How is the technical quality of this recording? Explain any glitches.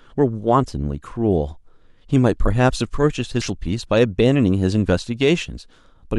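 One real glitch here: at 3.42 s, compressed frames are skipped. The sound jumps ahead roughly 300 ms, about three 92.9 ms frames.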